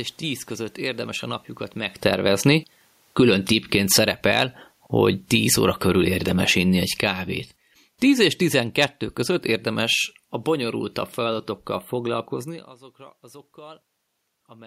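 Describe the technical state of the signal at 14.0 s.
At 14.0 s the signal is intact, with only the room's own background noise present as part of the recording.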